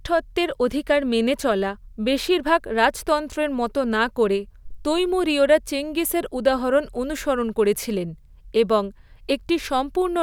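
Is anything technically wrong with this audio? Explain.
No, nothing technically wrong can be heard in this recording.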